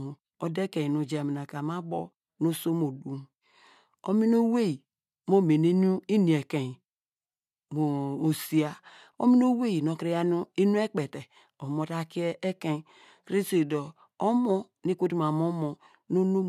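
No technical faults can be heard anywhere in the recording.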